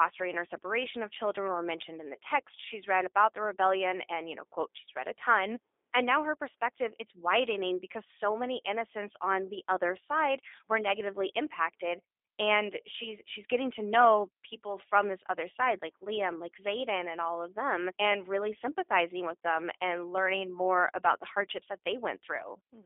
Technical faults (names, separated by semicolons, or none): G.729 codec